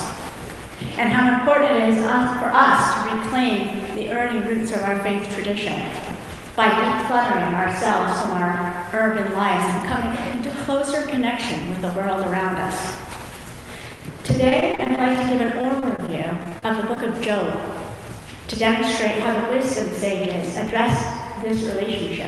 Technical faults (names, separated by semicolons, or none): repeated packet loss (robotic sound)